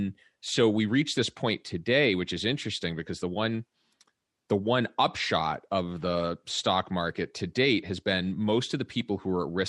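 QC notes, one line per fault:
No faults heard in this clip.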